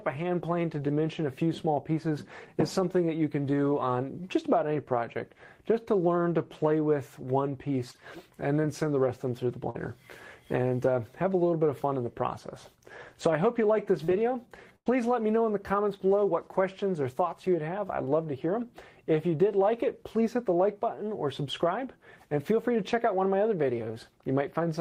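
The audio has four instances of short concealed packet loss, at 4.73–4.77 s, 7.91–7.96 s, 9.70–9.76 s and 14.04–14.10 s. Each is a brief smear or wobble where roughly 20 to 40 ms of audio never arrived in time. The receiver patched the gap by extending the preceding sound and then blended back in. Unlike a dropout or a click from a damaged file, nothing goes silent and there is no sharp edge, only a short stretch that sounds smeared. A burst of packet loss at 14.76–14.88 s is different. About 100 ms went missing in a row, and the concealment had to carry on much longer, so the last sound is stretched into a held buzz or hiss that fades before the audio resumes further on. That length and the audible fade separate it from the shorter patches, which recover before any decay is heard.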